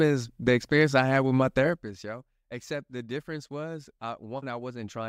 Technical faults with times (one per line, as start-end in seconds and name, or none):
1.59-1.98 zipper noise